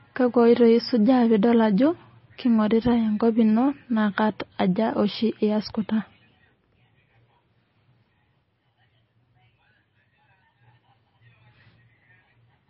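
Throughout the speech, nothing above 5.6 kHz survives and the sound turns heavily watery and swirly, likely from MP3 compression starved at a bitrate near 24 kbps.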